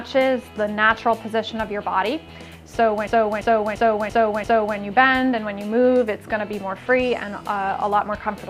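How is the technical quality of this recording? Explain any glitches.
The recording has one glitch: a system hang loop from 3.07 s to 4.78 s. For that stretch, a single segment about 341 ms long plays five times in a row at roughly 2.93 repeats per second. The result is a slow, machine-gun stutter, which fits a 16384-sample ring buffer at 48 kHz. The computer or its driver stalled while the audio hardware kept replaying that same buffer. On a waveform, you would see five identical blocks placed side by side. On a spectrogram, the same pattern would be tiled, with sharp vertical seams at every loop boundary. Little or no audio appears to be lost around the hang.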